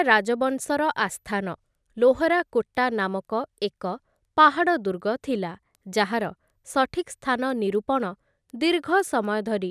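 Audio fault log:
throughout, resampler restarted on every block: steady ticks at 4 Hz beneath the speech, since each 250 ms block was resampled in isolation, leaving an error at every block edge.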